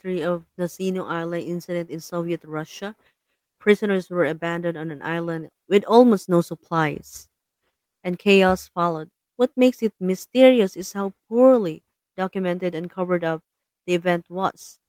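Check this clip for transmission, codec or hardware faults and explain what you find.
Nothing to report: no audible fault anywhere in the speech.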